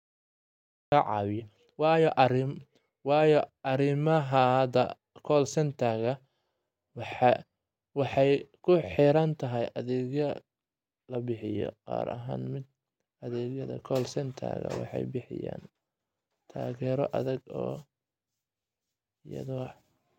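For the first 0.92 s there is nothing but digital silence, and then the speech bursts in abruptly in the middle of a sound, with no natural attack or fade-in. This is a cut-off start: the recording or stream began late, so the opening was never captured.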